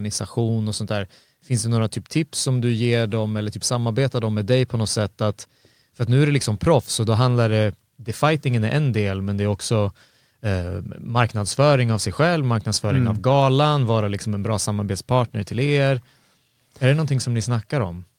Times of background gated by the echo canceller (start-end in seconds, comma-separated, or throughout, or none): none